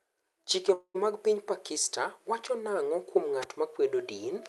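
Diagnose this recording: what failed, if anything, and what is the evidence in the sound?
Call audio freeze, 0.73 to 0.96 s, before "mag piny". The last sound fades to silence, then resumes intact. Likely network delay emptied the jitter buffer.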